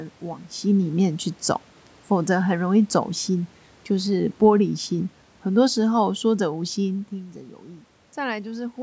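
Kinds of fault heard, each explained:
Automatic gain falling: from 3.99 to 7.08 s the gain control, reacting to input it found too loud or too noisy, eases its level down by about 5 dB, so voice and background sink together.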